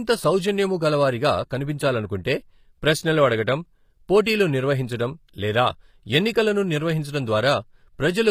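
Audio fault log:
Throughout: HE-AAC compression. The speech was likely squeezed through an HE-AAC v2 encoder at a low rate, consistent with about 24 kbps. Its treble is rebuilt from copied lower bands rather than coded, so upper harmonics misalign, and sibilance turns plainly gritty and metallic.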